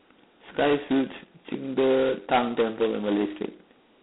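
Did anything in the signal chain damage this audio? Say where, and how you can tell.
Yes, at the codec stage: G.726 ADPCM coding at what sounds like 16 kbit/s, heavily damaging the speech throughout. Too few bits per sample leave a harsh, rasping hiss that rises and falls with the speech level, and nothing reaches above 3.9 kHz.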